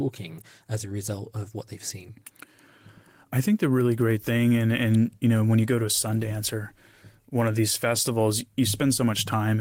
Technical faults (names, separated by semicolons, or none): none